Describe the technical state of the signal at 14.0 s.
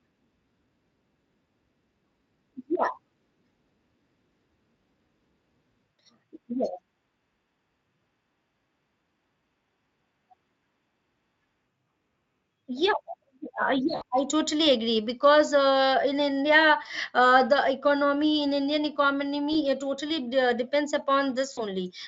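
VoIP packet loss concealed by the speech codec occurs from 13.95 to 14.02 s, just before "I totally agree because". About 60 ms of audio never arrived, which fits roughly three lost frames, so the Speex decoder filled the gap by extending its last pitch and vocal-tract filter while lowering the gain each frame. The speech smears into a buzzy or noisy fading tone, and the voice stays weak or distorted for tens of milliseconds after the packets resume.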